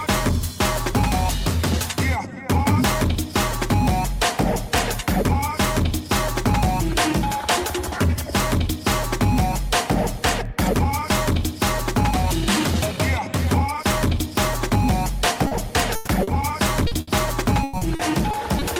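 At 2.68 to 2.84 s, integer overflow cracks harshly on loud peaks. The signal wrapped to the opposite sign instead of limiting. Single sharp cracks recur at 4.78, 10.29, 11.62 and 14.38 s.

At 15.47 s, a short concealed packet loss fills 40 ms with continued sound. It leaves a brief smear.

From 15.95 to 16.09 s, a burst of packet loss patches 120 ms. The last sound is held and fades, and the audio resumes further on.

Further short concealed losses of 40 ms each smear the audio at 16.23 and 16.87 s.

A second burst from 17.01 to 17.09 s replaces 60 ms with fading continuation.

From 17.63 to 18.63 s, repeated packet loss gives choppy sound with pieces missing. Five gaps are patched, the longest 100 ms, about 22% of the stretch.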